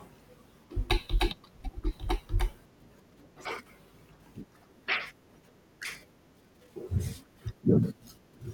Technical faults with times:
1.05 corrupt FLAC frame
5.84-5.93 compressed frames skipped

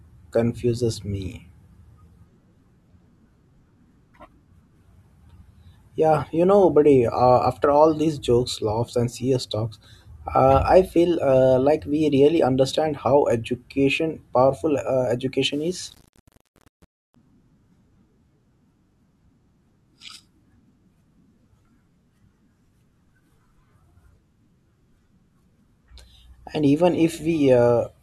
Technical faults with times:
15.52-17.16 low bit depth without dither

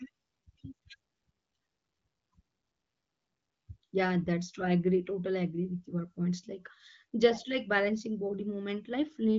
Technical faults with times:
none

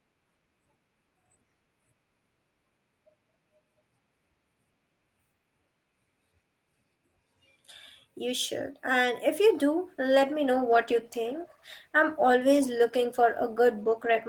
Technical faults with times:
9.86-14.29 call bitrate drop

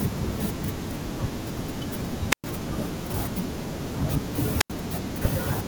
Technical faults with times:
2.30-2.44 wireless microphone squelch dropout
4.59-4.70 wireless microphone squelch dropout

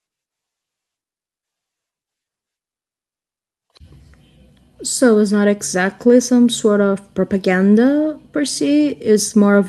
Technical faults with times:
none

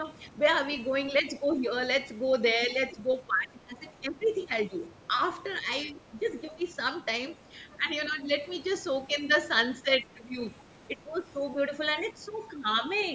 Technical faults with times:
1.51-1.55 other side's voice leaking through
2.67-11.18 speech suppressed in double talk
7.29-7.77 other side's voice leaking through
12.13-12.83 speech suppressed in double talk
12.45-13.05 other side's voice leaking through

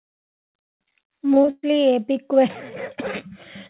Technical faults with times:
1.34-1.65 repeated packet loss (robotic sound)

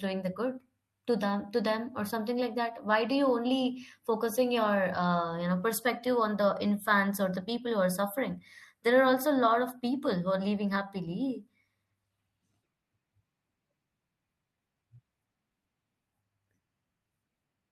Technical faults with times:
none

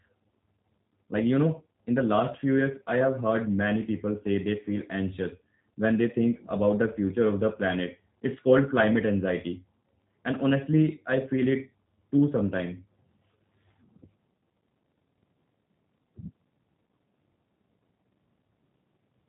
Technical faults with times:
0.00-19.28 G.729 codec

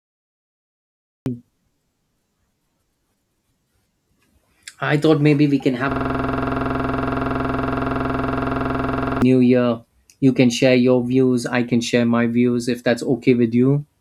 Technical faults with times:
0.00-1.26 cut-off start
5.91-9.22 system hang loop

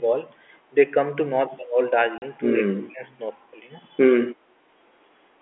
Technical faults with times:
2.18-2.22 packet loss filled with silence
2.63-3.04 speech suppressed in double talk
4.34-4.45 background gated by the echo canceller

